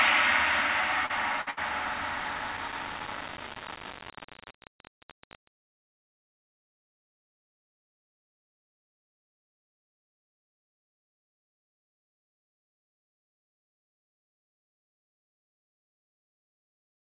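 From start to finish the whole clip has a coarse, grainy edge. The grain tracks the sound itself, so it is rough on the louder parts and turns to a sputtery crackle as things get quiet. That is most likely low bit depth without dither: the signal was rounded to something like 4 bits with no dither to smooth it, so the rounding error rides along with the audio at only about 10 dB below it.

At 1.06 s there's a quick smear lasting about 50 ms. That's short concealed packet loss. Roughly 40 ms of audio never arrived in time, and the receiver papered over the hole by stretching the preceding sound for about 33 ms before blending back into the real signal. What you hear is a little wobble rather than a clean dropout.

Right after that come two bursts of packet loss, from 1.41 to 1.48 s and again from 1.50 to 1.59 s. Each time about 60 ms went missing. The receiver kept the last sound going for roughly 50 and 65 ms, fading it out as the gap wore on, so you get a brief held buzz or hiss that dies away. 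The audio then picks up further along, with a chunk skipped. The call path itself, G.711 mu-law, explains why nothing comes through above 4 kHz.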